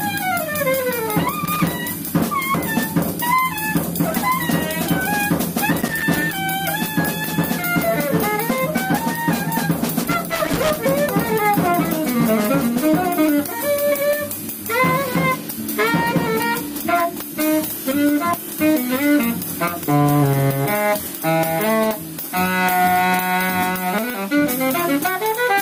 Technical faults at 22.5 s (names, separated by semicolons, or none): none